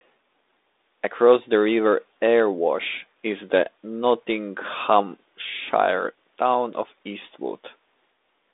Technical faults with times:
none

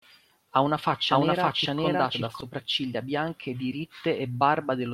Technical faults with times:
1.11-2.41 doubled audio track

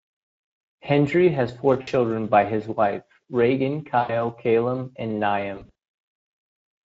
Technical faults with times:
0.00-6.85 Speex codec
1.81-1.89 VoIP packet loss concealed by the speech codec
3.99-4.14 VoIP packet loss concealed by the speech codec
5.55-5.71 VoIP packet loss concealed by the speech codec

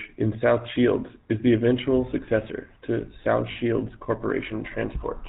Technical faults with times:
0.00-5.28 GSM full-rate codec
3.52-3.57 lost GSM frames

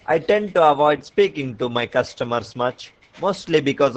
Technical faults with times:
0.00-3.97 Opus voice compression

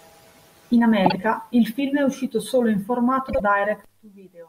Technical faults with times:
1.05-1.17 frames out of order
3.28-3.40 frames out of order

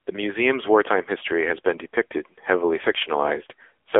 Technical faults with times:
0.00-4.00 AMR narrowband mobile codec

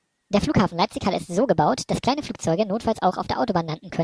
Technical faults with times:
0.00-4.03 wrong sample rate

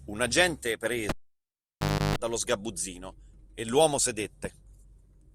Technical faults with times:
1.09-2.16 cable pulled and plugged in

